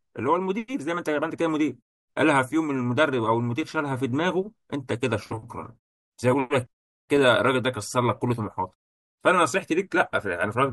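No technical faults can be heard anywhere in the speech.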